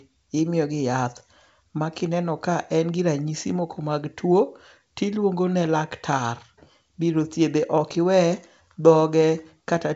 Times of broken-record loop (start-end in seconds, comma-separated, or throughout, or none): none